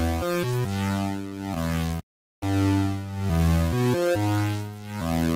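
From 1.22 to 1.91 s the sound shows repeated stalls, a stutter. Packets arrived late, so the jitter buffer emptied five times. Each time the last sound was stretched to fill, 56 ms in all, the longest 12 ms. Nothing is lost, but the sound drags and hiccups.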